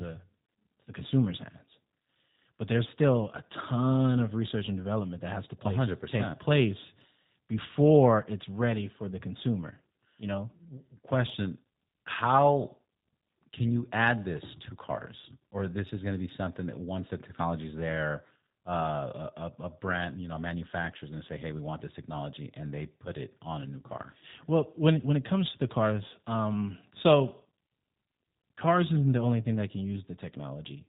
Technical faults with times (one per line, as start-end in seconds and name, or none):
0.00-30.88 G.729 codec